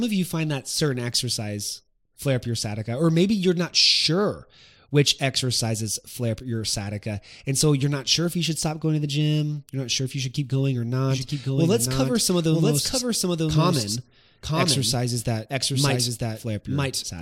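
A doubled audio track runs from 11.1 s to the end of this speech clip: a full-band second copy trails the original by about a second at roughly equal level, entering abruptly with no decay or room colour, most likely from a slower second capture path.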